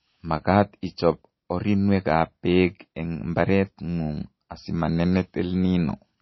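From start to finish the speech has nothing above 5.8 kHz and a watery, swirling texture, most likely MP3 compression at a low bitrate near 24 kbps. Unlike a simple low-pass filter, weak frequency lines flicker between frames, and that flickering causes the swirl.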